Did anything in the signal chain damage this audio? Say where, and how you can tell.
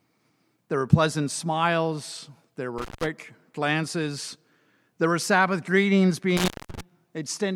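Yes. An intermittent contact in the analogue wiring: a loose plug or cable briefly opened twice, around 2.78 to 3.07 s and 6.37 to 6.81 s. The sound drops out for about 170 ms, then 210 ms, with crackle at each edge and faint hiss in the gaps.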